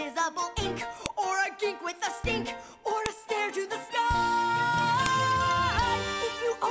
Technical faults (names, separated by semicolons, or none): file header played as audio